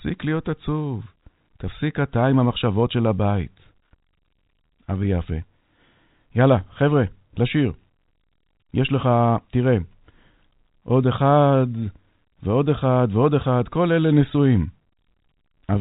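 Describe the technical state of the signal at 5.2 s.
At 5.2 s the speech is intact, carried cleanly through G.711 telephone coding with nothing above about 3.8 kHz.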